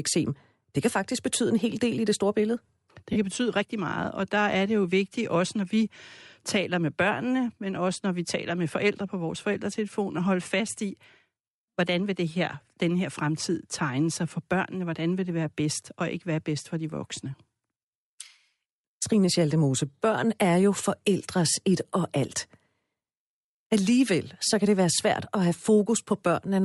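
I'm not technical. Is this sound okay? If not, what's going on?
No. All the way through, the speech has a breathy, grainy edge, especially on the higher sounds. That's likely Bluetooth LC3 compression, the squeezing Bluetooth LE Audio uses to send sound wirelessly; it throws away some fine detail and fills the gaps with hiss.

There's also a very short glitch at about 3.13 to 3.16 seconds, right before "kan betyde rigtig meget". That's lost LE Audio frames: about 30 ms of sound never arrived, so the receiver patched the gap with a rough, noisy guess.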